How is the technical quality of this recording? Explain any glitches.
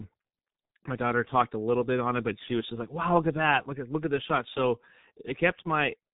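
The technical quality is poor. One fault runs through the whole speech recording: heavy G.723.1 codec damage. It is present from start to finish. Nothing is heard above 3.8 kHz, so the speech sounds muffled and narrow. The codec packs sound into 30 ms frames and rebuilds the voice from a coarse model that updates slowly. The sound fits a bitrate of about 6 kbit/s. The voice comes out hoarse. Consonants smear together and lose their edges.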